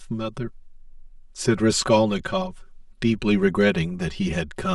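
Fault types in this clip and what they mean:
Channel delay (comb filtering): The speech sounds hollow and phasey from start to finish, thinned out as though heard through a tube, with a fixed colouring that never shifts as the talker moves through pitch. One channel trails the other by around 5 ms, and summing them to mono cancels the shared content at evenly spaced frequencies, starting near 100 Hz and repeating roughly every 200 Hz upward, which carves a comb of notches through the spectrum.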